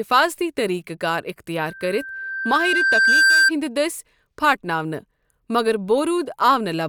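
Speech with loudspeaker feedback squeal from 1.68 to 3.51 s, just after "طریقہٕ کار": a 1.6 kHz tone swells over roughly one and a half seconds to about 5 dB above the speech. Unlike a steady interfering whistle, it grows on its own through the microphone–speaker loop.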